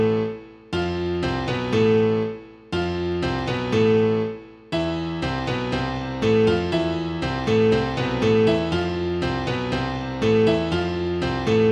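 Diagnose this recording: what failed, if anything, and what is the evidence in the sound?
A fine, regular rattle of clock slip clicks runs from 0.1 s to 11.7 s, ticking about every 20 ms, hundreds in all, strongest where the sound is loud and sustained. The likely cause is a clock mismatch at the converter or interface stage: two devices on free-running clocks, differing by roughly 1000 ppm, so a single sample is dropped or repeated each time the drift adds up. Buffer underruns would leave audible gaps; these ticks leave none and keep a steady spacing.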